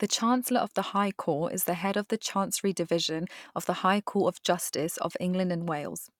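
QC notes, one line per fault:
Nothing to flag here, the speech holds together with no technical faults to note.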